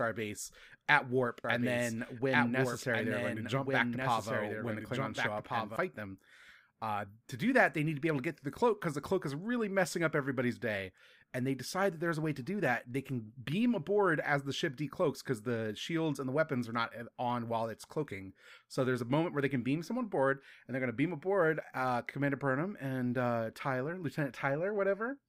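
From 1.44 to 5.76 s, just after "at warp", a doubled audio track appears. A dry, full-band copy trails about 1.5 s behind, roughly 5 dB quieter, and starts and stops abruptly, likely from a second, slower capture path. On a spectrogram the same patterns repeat, shifted right.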